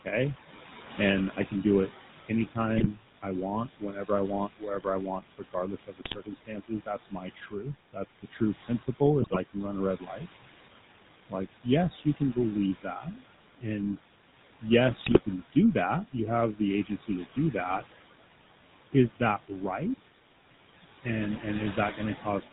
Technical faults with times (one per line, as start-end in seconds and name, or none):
0.00-22.52 noise suppressor artifacts
0.00-22.52 GSM full-rate codec
0.97-10.23 speech cut by the noise suppressor
2.77-2.87 GSM bit errors
6.04-6.18 GSM bit errors
9.22-9.37 GSM bit errors
11.29-13.99 speech cut by the noise suppressor
14.61-17.85 speech cut by the noise suppressor
14.96-15.20 GSM bit errors